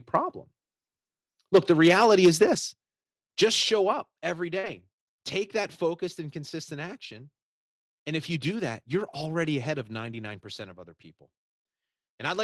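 A speech recording over an Opus call path limited to about 12 kHz. From 1.54 to 2.44 s the input level likely ran about 7 dB past the converter's ceiling, causing microphone overload: a few percent of samples have their peaks flattened, giving the loudest syllables a harsh, crackling edge. The call software then likely stepped the microphone volume down three times, at 1.56 s (about 2 dB), 2.55 s (about 6 dB) and 3.93 s (about 4 dB, just after "just show"), so voice and background drop abruptly in level each time. At 4.59 to 4.65 s a short concealed packet loss occurs: about 40 ms never arrived in time, and the decoder filled it by extending the preceding sound before blending back, heard as a brief smear just before "take that focused and". Overlapping it, from 4.63 to 4.77 s, comes a lost packet rebuilt from error correction: roughly 80 ms, which fits four lost packets, was played from low-bitrate copies carried in the following packets, so there is no gap, but that stretch sounds rougher and noisier.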